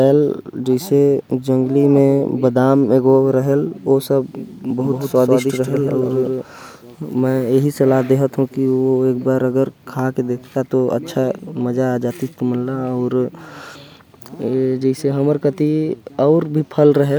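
Speech, with a doubled audio track from 4.81 s to 6.43 s: a second, full-band copy of the same audio trails the original by roughly 150 ms at about 5 dB lower, then drops out abruptly. Unlike room echo or reverb, the copy has no decay tail, no tonal colouring and no further repeats. It is a single clean duplicate, most likely from a second, slower capture path or an edit leaving two copies misaligned.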